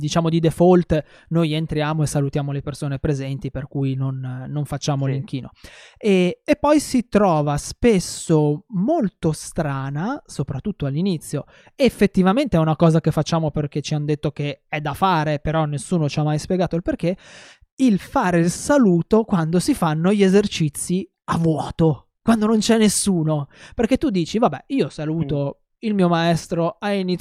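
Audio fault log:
No faults are heard in this speech recording. Nothing in the audio calls for an entry in the log.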